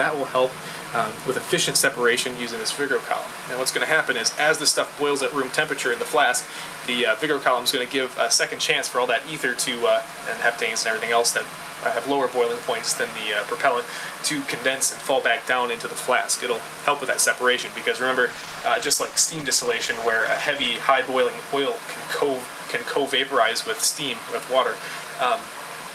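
At 18.3 s a call bitrate drop sets in and lasts until about 20.75 s. The link's bandwidth estimate fell, so the encoder spent far fewer bits for roughly 2.4 s. The sound turns coarse, watery and dull, which fits a fall from 48 to 14 kbps.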